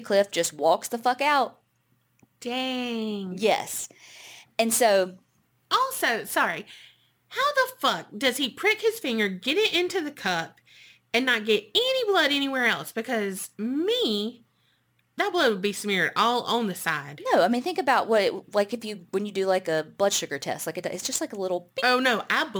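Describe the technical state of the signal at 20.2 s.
At 20.2 s the speech carries crude rate conversion, present throughout the clip. Samples were dropped by nearest-neighbour picking, likely from 48 kHz to 44.1 kHz, leaving a gritty, inharmonic fizz roughly 25 dB down, which shows on a spectrogram as faint, unrelated tonal lines.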